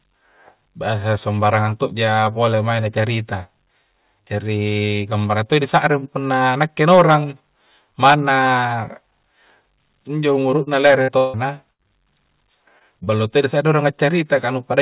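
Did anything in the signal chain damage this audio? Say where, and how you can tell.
Yes. The damage is in the network stage of a call path. The audio was carried at telephone bandwidth, with nothing above 4 kHz, which fits a 64 kbps G.711 A-law codec. Four short concealed packet losses are audible as brief smears or wobbles at 10.64–10.68 s, 11.83–11.86 s, 12.79–12.82 s and 13.04–13.09 s. Each is a roughly 20 ms hole that the receiver patched by extending the preceding waveform and then crossfading back into the real audio.

Two bursts of packet loss are longer. The first runs 11.02–11.10 s and the second 11.72–11.81 s, with about 60 ms and 80 ms of audio missing. In both, the concealment stretches the last sound into a held buzz or fading hiss that decays over the gap. The audio then resumes further along, so the material in between is gone rather than delayed. That points to several consecutive packets arriving too late or not at all.

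From 11.18 to 11.36 s, roughly 160 ms of audio is missing. The entire gap is bridged by a synthesised continuation that fades but never drops to silence before real audio returns. The length of the hole points to a long network dropout as the likely cause. It sits between the two bursts, so the whole 11.0–11.8 s region reads as one badly degraded stretch of transmission.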